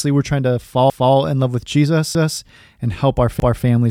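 At 0.9 s, after "trying to", at 2.15 s, after "in love with", and at 3.4 s, after "and help our", the speech stutters. These are overlapping chunks. The audio arrives in 1-second chunks. Each starts 250 ms early, so that stretch plays twice at every join.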